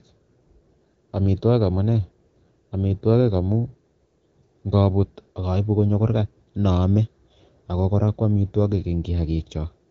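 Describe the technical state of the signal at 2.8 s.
At 2.8 s the speech is intact, carried cleanly by what sounds like AMR wideband (HD Voice) coding at a rate that fits 12.65 kbit/s, with no fault present at that moment.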